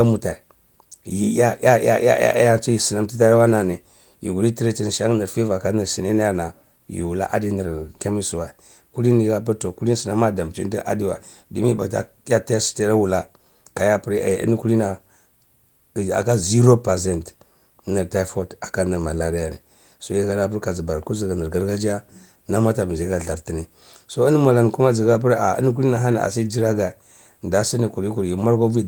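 No technical faults turn up in this speech clip; it carries the light, fullband character of Opus voice coding in its hybrid mode, with content reaching up to about 20.2 kHz, consistent with a rate in the region of 24 kbps.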